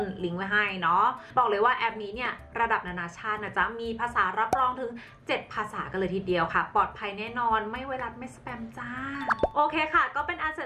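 No technical faults are audible anywhere in the audio.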